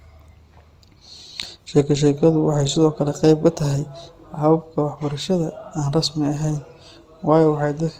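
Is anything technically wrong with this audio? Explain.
Yes. The whole speech clip sounds grainy and rough, likely from Opus compression in CELT mode, which fills bit-starved bands with noise. The sound points to around 24 kbps.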